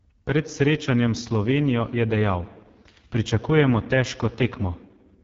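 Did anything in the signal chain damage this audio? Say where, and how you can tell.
Yes. The speech sounds rough and raspy from start to finish, with nothing above about 7.3 kHz, which points to the AMR wideband (HD Voice) codec at its lowest 6.6 kbit/s mode. The pulse-driven vocal tract model has too few bits to code speech detail, and the top band is only shaped noise.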